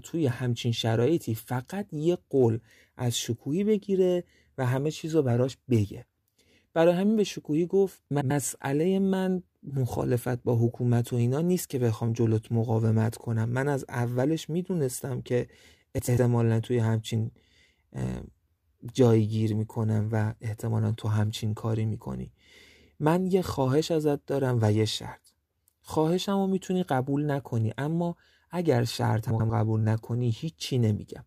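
Frames out of order at 8.11–8.31 s, 15.98–16.18 s and 29.30–29.50 s: two adjacent blocks of about 96 ms each play swapped, giving a garbled flutter.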